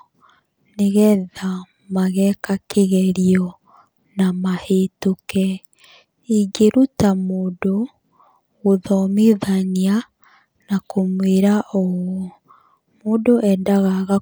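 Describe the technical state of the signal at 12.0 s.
At 12.0 s the speech signal is intact, with no audible fault at that moment.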